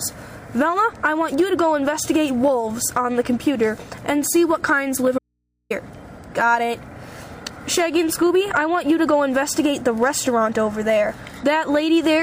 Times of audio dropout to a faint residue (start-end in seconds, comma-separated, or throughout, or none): 5.18-5.70